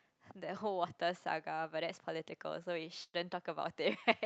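At 3.03 to 3.15 s, a burst of packet loss drops 100 ms of speech. The receiver holds and fades the last sound, then resumes further on.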